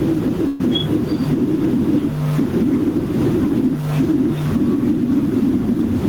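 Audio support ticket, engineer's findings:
Gain pumping throughout, a swing of around 5 dB. The likely cause is input gain set too high, with a fast limiter clamping peaks. Dynamics sound squashed. Room noise sits about 34 dB below speech.

Burst of packet loss, 0.47 to 0.61 s. Probable component: network transport. The receiver extends the last sound and fades it for about 120 ms, giving a held buzz or fading hiss. Playback then resumes with about 120 ms of speech missing.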